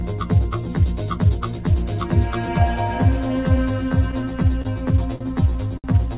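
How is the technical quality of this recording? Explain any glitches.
The recording has a constant hollow colouring and several timing glitches in its second half. It passes through a call codec band-limited to 4 kHz, which fits G.711 mu-law at 64 kbps.

Channel delay (comb filtering) runs through the whole clip. One channel arrives roughly 10 ms behind the other, and the two are summed to mono. Wherever the shared content lands out of phase, it cancels. This cuts a row of evenly spaced notches, starting around 40 Hz. The result is a thin, phasey, slightly hollow tone that never changes.

Repeated stalls (stutter) occur from 3.89 s to 4.68 s. Packets kept arriving late, so the jitter buffer ran dry five times. Each time, the receiver extended the last sound until fresh audio came. The longest wait was 30 ms, and about 69 ms was filled in total, roughly 9 percent of that stretch. Nothing is lost. 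The sound drags and hiccups unevenly through this section.

Short stalls from a late packet happen twice, from 5.16 s to 5.24 s and from 5.78 s to 5.87 s. In each case a single packet missed its slot, and the buffer emptied. The receiver held the previous sound for 46 ms the first time and 64 ms the second. It then resumed from exactly where it stopped. No audio is missing. Each stall is heard as a briefly frozen sound with a faint buzz or dip.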